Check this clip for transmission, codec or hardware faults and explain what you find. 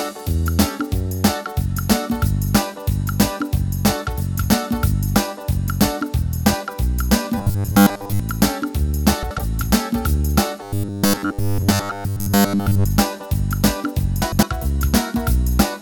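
Two kinds of fault are audible: two stretches of robotic sound and two brief passages of frames out of order.

Robotic sound from repeated short buffers runs from 7.38 to 8.20 s and again from 10.63 to 12.86 s. Each stretch has a rigid, metallic buzz at 100 Hz that loosely tracks the underlying sound. The likely cause is new audio arriving too slowly, so the playback side keeps looping its most recent fragment. A 100 Hz buzz fits a repeated chunk of about 10 ms. Most of the real audio in those spans is skipped rather than played.

Frames out of order occur at 9.23 to 9.39 s and at 14.22 to 14.43 s. In each case two adjacent blocks were decoded in swapped order. The blocks are about 78 ms each at 9.23 s, which fits three frames per block, and about 105 ms each at 14.22 s, which fits four. The result is a short garbled flutter. Nothing is dropped, so the timing afterwards stays intact.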